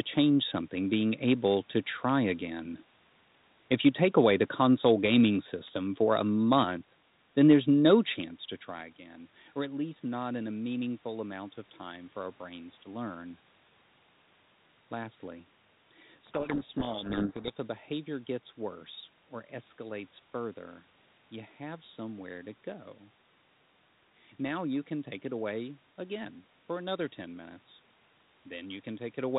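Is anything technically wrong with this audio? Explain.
Yes. From 16.26 to 17.52 s, just before "a behavior gets worse", there is a codec payload misread: the speech is buried under harsh, gritty distortion for about 1.3 s, then clears. The two ends disagreed on the bit order inside each G.726 code word, so the decoder applied correct-looking ADPCM differences built from scrambled bits, and its adaptive predictor was thrown off. The light band-limited coloration elsewhere fits G.726 at 32 kbit/s.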